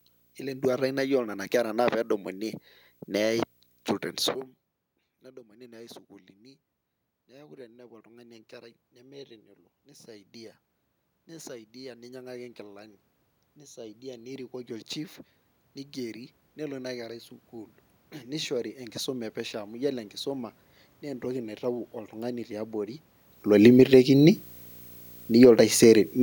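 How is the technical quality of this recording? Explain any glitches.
Two faults stand out in this speech recording. One runs the whole way through, and one is near the end.

The first is video or display buzz, present throughout. A screen or video cable is leaking into the audio path, putting a 59.94 Hz buzz with hash on top underneath the speech. There's also a whine at 15.7 kHz from the line scan. The buzz sits well down, roughly 35 dB below the voice.

The second is automatic gain falling, from 22.87 to 25.6 s. The gain control found the input too loud, or its background noise too strong for its starting gain, and eased itself down by about 6 dB. The speech and the room noise sink together, which is different from the talker shifting position around 23 s.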